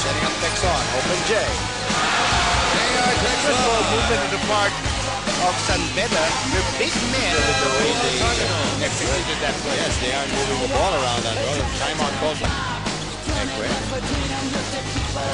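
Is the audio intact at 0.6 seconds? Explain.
No. At 0.57 s there is a dropped buffer (overrun). The likely cause is that the program did not read its samples before the hardware overwrote them. Roughly 15 ms of audio is lost. The two sides join directly, with no silence. It is heard as a small jump forward.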